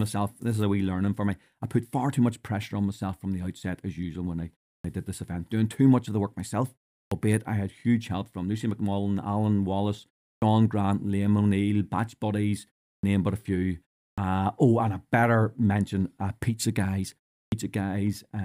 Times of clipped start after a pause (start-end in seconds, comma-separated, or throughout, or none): 4.78-4.84, 7.05-7.11, 10.36-10.42, 12.97-13.03, 14.12-14.18, 17.46-17.52